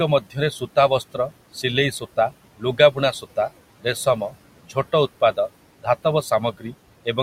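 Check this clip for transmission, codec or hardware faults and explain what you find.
The clip has two related faults, both from a noise suppressor in the processing chain.

Noise suppressor artifacts run through the whole clip. The suppressor treats steady bands as noise and pulls them down, by about 18 dB, frame by frame. The room noise, about 19 dB under the speech, sinks in the gaps and rises under speech.

Speech cut by the noise suppressor occurs in three stretches: 0.21 to 1.64 s, 2.0 to 5.38 s, and 5.83 to 7.18 s. The suppressor mistakes quiet speech for noise and ducks it with the background. Drops reach about 14, 18 and 16 dB. Roughly 200 ms, half a second and 200 ms are affected. Soft consonants and endings sound swallowed.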